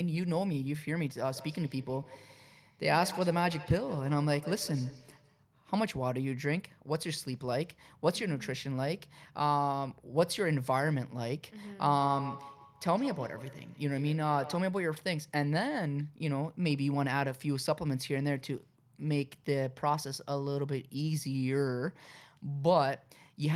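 From 1.35 to 5.46 s and again from 11.93 to 14.8 s, the speech carries a feedback echo between two devices. A second device in the same room replays the call audio, the local microphone picks it up again, and the local echo canceller cannot remove sound it did not play itself. Each syllable returns roughly 150 ms later as a thinner, ringing copy, peaking at about 14 dB below the speech in the first stretch and about 12 dB below in the second.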